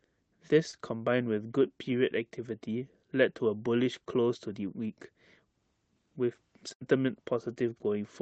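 Short concealed packet loss at 0.71 to 0.75 s: a sliver of the speech arrived too late for the decoder, so the receiver stretched the preceding sound for about 17 ms to bridge roughly 20 ms of missing audio before blending back. It comes across as a brief smear or wobble.

Burst of packet loss at 6.73 to 6.83 s: about 80 ms of consecutive audio never arrived in time. The receiver extended the last sound for roughly 75 ms while fading it down, giving a held buzz or dying hiss. The speech then picks up further along, with the intervening stretch gone. Across the clip, the call codec's band limit near 8 kHz is audible as a dulled top end.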